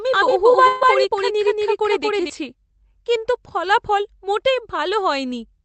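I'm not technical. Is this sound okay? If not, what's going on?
No. From the very start until about 2.3 s, everything is heard twice, with a second copy just as loud trailing about a fifth of a second behind. This is a doubled audio track, likely caused by the sound being picked up a second time through a slower route.

From 0.67 to 0.83 s the sound briefly smears into a held buzz or fading hiss, then jumps ahead with about 140 ms missing. That is a burst of packet loss. Pieces of the call were lost or arrived too late, and the receiver stretched the last sound to cover the gap.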